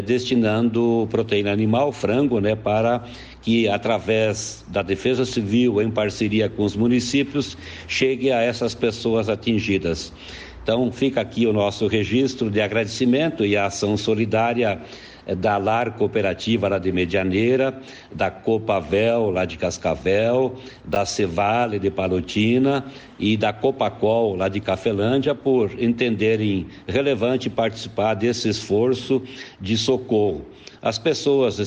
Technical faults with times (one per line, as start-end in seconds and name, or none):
20.93-20.96 chunks out of order